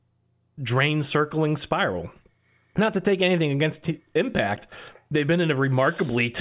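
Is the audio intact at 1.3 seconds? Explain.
Yes, the audio is intact at 1.3 seconds, with no audible fault at that moment.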